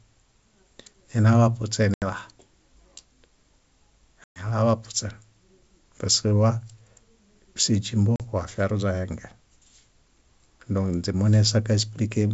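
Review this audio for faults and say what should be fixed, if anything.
There's packet loss on an ADPCM call at 1.94–2.07 s, 4.24–4.46 s and 8.16–8.22 s (about 80, 120 and 40 ms missing), heard as hard silent holes. The decoder's predictor drifts out of step, so each gap comes back with a click or wobble before settling. Adding packet loss concealment and redundancy on the wideband G.722 link would fix it.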